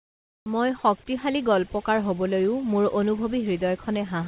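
Comfort noise in place of the background, from 0.0 to 0.46 s: the opening 460 ms is a flat, featureless hiss about 26 dB quieter than the room background that follows, and none of its texture survives. The likely cause is the sender pausing transmission while the receiver filled the gap with synthetic noise only broadly matched to the real background.

Overdone noise removal runs throughout. The reduction is pushed so hard that individual frequency bands close to its noise estimate are cut deeply or muted outright, and the quieter parts of the speech go with them. Between phrases the background drops and breaks up into sparkling artefacts. The voice is confined below 4 kHz by the call codec.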